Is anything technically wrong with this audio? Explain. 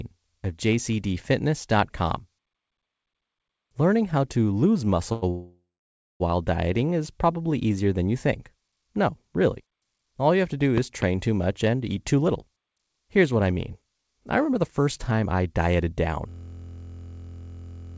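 Yes. This speech clip, which has no content above 8 kHz as expected from a wideband call codec such as G.722, has five faults.

At 5.12 to 5.24 s, a short stall from a late packet holds one sound for about 96 ms. A packet arrived late, so the receiver stretched the last audio until it came.

From 5.30 to 6.22 s, a call audio freeze inserts a 0.9 s gap: the last sound continued and fading, then about 570 ms of silence. Packets were likely held up in transit and the jitter buffer emptied. Nothing is lost, because playback resumes where it stopped.

Between 10.78 and 11.04 s, a loud pop occurs twice, as sharp snaps about 15 dB above the speech, which continues underneath. The likely cause is a voltage spike from a plug, switch or static.

From 11.66 to 16.07 s, a jitter buffer speed-up makes the speech sound hurried, at 109% speed with unchanged pitch. The receiver cut many short slices, roughly 0.4 s in total, to reduce built-up delay.

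From 16.29 s to the end, a system hang loop replaces the speech with a steady 43.1 Hz buzz. A 23.22 ms piece repeats exactly, which fits a 1024-sample buffer cycling while the system froze.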